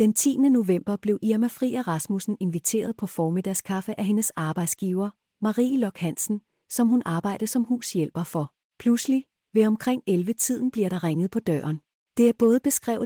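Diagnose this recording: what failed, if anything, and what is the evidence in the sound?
Nothing in this speech recording failed at any stage. It has passed through Opus voice compression at 24 kbps in hybrid mode, keeping the full band above 8 kHz with only light coding damage.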